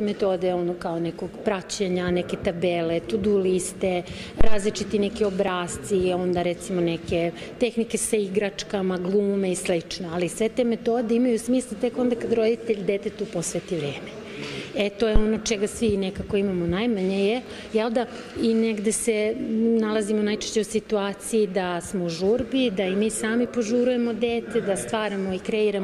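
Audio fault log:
4.41–4.64 s and 15.16–15.24 s, phantom power thump. A deep, dull thump lands under the sound at each point. The first is longer and dies away in about 52 ms. The second is shorter and fades in about 18 ms. Each fits a supply being switched on a live input. The voltage step passes through the coupling capacitors as a single low-frequency push.
5.48 s, 17.46 s and 23.46 s, audio missing between chunks. At each point the sound skips forward by a few milliseconds, with no gap of silence. It reads as a tiny jump. The times fall on multiples of 6 s apart. That fits a recorder working in 6-second chunks that likely drops a sliver of audio while closing one block and opening the next.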